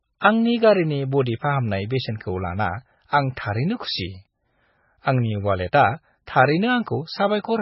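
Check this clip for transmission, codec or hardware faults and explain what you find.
One fault runs through the whole clip. From start to finish the speech sounds watery and swirly, with nothing above 5.6 kHz. That is heavy damage from likely MP3 compression: starved of bits, consistent with about 17 kbps, the encoder cut the treble and dropped weak frequency lines.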